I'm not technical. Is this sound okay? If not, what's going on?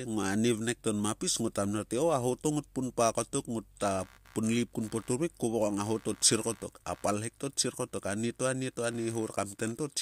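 No. From 3.84 s, just after "pun pa kotok", a quiet buzz pulsing about 70 times a second runs to the end. This is computer activity noise, caused by the computer's working parts disturbing the audio circuit.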